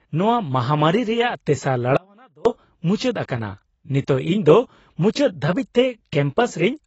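A speech recording with two problems. Throughout, the sound is band-limited, with nothing above about 7.9 kHz, and the codec damage is plainly audible. This is AAC compression, likely AAC-LC at a low bitrate, which fits about 24 kbps. From 1.97 to 2.45 s, about half a second, the speech suddenly drops out. It returns just as abruptly. The gap holds only a faint leak of the signal, roughly 30 dB down. This is an audio dropout to a faint residue, likely a brief signal loss with the path staying live.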